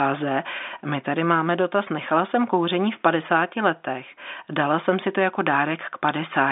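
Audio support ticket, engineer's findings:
No faults found; speech arrives over a standard G.711 telephone path, band held to roughly 250 Hz–3.6 kHz with nothing above 3.7 kHz, as expected for a 64 kbps line.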